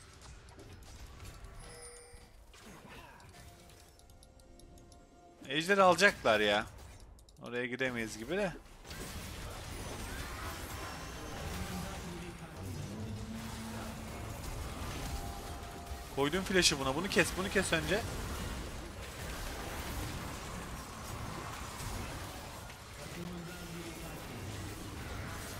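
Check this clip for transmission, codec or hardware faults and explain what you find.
One hardware fault is present. From 23.23 to 23.29 s there is loose connector crackle: a dirty or worn contact repeatedly breaking the signal path, producing a brief irregular scratchy burst.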